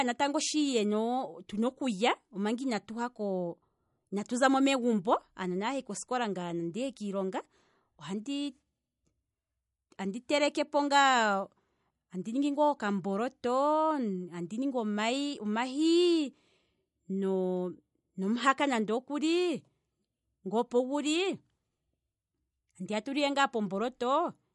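From start to finish the audio shows the signs of likely MP3 compression at a starved bitrate, consistent with roughly 48 kbps. Short of bits, the encoder has dropped everything above 11.1 kHz and let weaker frequency lines flicker on and off between frames. The speech comes across dull at the top, with a watery, swirling texture, metallic chirps on s sounds, and consonant onsets smeared rather than crisp. The damage is plainly audible.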